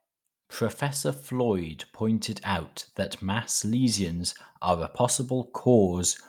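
No technical faults can be heard anywhere in this speech clip.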